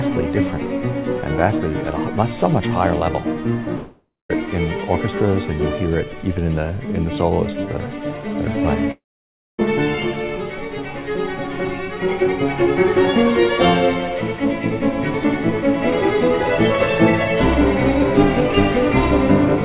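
At 3.76 to 4.31 s and again at 8.91 to 9.60 s, there's what sounds like a long network dropout, likely packets lost in transit. The receiver smears the last sound into a fading buzz, then goes quiet before the audio resumes with that stretch simply gone, all through a call line that tops out at 4 kHz.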